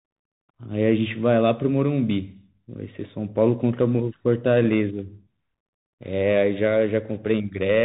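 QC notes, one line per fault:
throughout, Bluetooth CVSD headset codec: one-bit delta coding cuts everything above 3.8 kHz, a flat spectrogram ceiling, with granular hiss and scratchy, step-limited sibilants.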